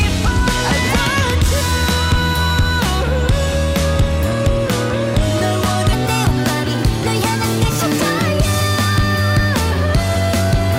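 From 5.93 s to the end, a section at the wrong speed plays 1.21 times fast, about three semitones higher and hurried, likely from playback against a mismatched clock.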